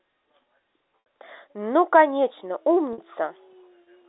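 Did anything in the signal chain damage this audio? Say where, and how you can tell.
Yes: network packet loss with pitch repetition at 1.04 s and 2.93–2.98 s. The receiver looped the last pitch period over 60 ms and 50 ms gaps, audible as a brief buzzy hold.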